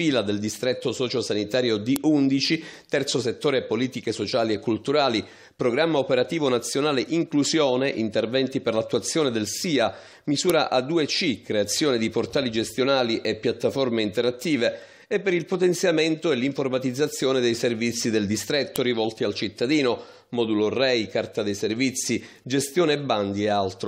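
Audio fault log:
1.96 s, 10.50 s and 18.76 s: file header played as audio. Each event is a sharp, loud click or snap, which points to a separate WAV piece beginning at that moment with its header left in place. The few dozen header bytes are read as sample values. These values bear no relation to the sound around them, so they form an abrupt spike. That is why each snap lands at a piece boundary and cuts across whatever the sound is doing.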